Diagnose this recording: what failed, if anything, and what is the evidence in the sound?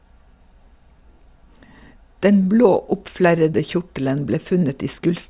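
Nothing failed; no faults are audible in this speech.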